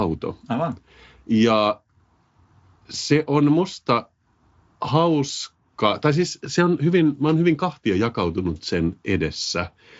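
At 6.46 s, right after "hauska tai siis" and just before "se on hyvin mä", there's a block of digital silence. For about half a millisecond the sound drops out to silence and snaps back with no fade, so you hear it as a tick or dip rather than a gap.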